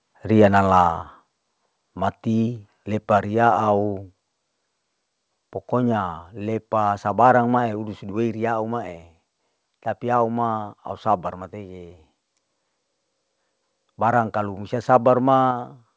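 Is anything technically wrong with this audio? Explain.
Yes. At 15.51 s the speech and background drop together by about 4 dB in one step, likely a microphone volume stepped down by the call software reacting to a hot input level.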